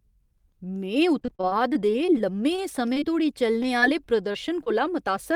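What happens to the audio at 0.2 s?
Nothing goes wrong at 0.2 s; the speech plays through that moment intact.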